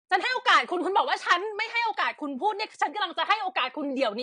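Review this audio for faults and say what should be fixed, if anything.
The speech has plainly audible AAC compression damage from start to finish. Nothing is present above 9.8 kHz, so the top end sounds dull. Sibilants turn fizzy and smeared. Sustained sounds take on a warble. The encoder is likely AAC-LC at a low bitrate, which fits roughly 32 kbps. At that rate it spends too few bits per frame, drops the high band and coarsens the rest. Encode from the original source at a higher bitrate, or keep a lossless master.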